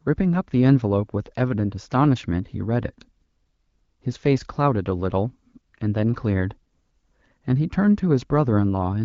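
No faults can be heard anywhere in the speech, which carries the light coding character of the AMR wideband (HD Voice) codec at a quality consistent with a 12.65 kbit/s mode.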